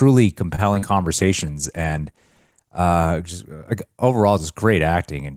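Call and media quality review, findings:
Short stall from a late packet, 0.55–0.60 s. Jitter buffer underrun; decoder held last sound ~27 ms until packet arrived, resumed same point. Nothing lost, playout now ~27 ms later. Audible as brief drawn-out sound, faint buzz or dip. Component: receive jitter buffer.

Short concealed packet loss, 0.74–0.77 s and 0.79–0.96 s. Packets missed decode deadline: ~20 ms then ~40 ms gone. PLC extrapolated prior pitch or shaped noise, cross-faded back. Brief smear or wobble, short consonant may drop. Second gap slightly stretched playout. Component: network path / decoder concealment.

Call bitrate drop, 1.19–2.85 s, ending just before "just uh overall". Bandwidth estimator lowered target; Opus encoder cut 32 to 15 kbps, held at lowest ~1.6 s. Coarser coding and reduced high band: speech rough, watery, dull until rate recovers. Component: sender congestion control / encoder.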